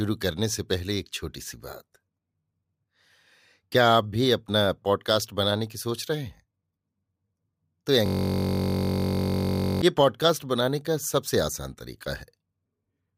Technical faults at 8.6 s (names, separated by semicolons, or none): system hang loop